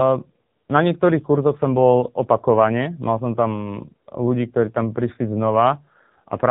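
From start to finish the speech sounds buzzy, synthetic and boxy, with nothing above 3.8 kHz, the heavy damage of the AMR narrowband mobile codec at a low bitrate around 6.7 kbps.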